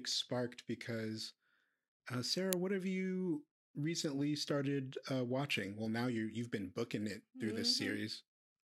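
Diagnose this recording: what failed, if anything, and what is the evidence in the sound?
A single sharp, very loud click of digital noise lands at 2.53 s in this speech, just before "what have you recently". It lasts well under a millisecond, about 0.73 ms. This is an uninitialised buffer at the driver or buffer stage. One block was sent to playback before any audio had been written into it, so whatever leftover values sat in memory were played out as samples. The burst's length fits a 32-sample buffer.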